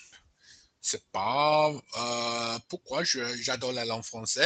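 The level pumps and flutters throughout, with held parts and tails sinking while sharp onsets come through, swinging by around 10 dB. This is a noise suppressor applied to music or sounds: a speech-tuned suppressor treats steady tones and decays as noise and keeps pulling them down. Sound is cut by the noise suppressor from 0.00 to 0.83 s, dropping by about 18 dB, and again from 2.62 to 2.89 s, by about 17 dB. In both places the suppressor judged that stretch to be noise and clipped its level and decay. Nothing is heard above 8 kHz, which fits the call path's band limit.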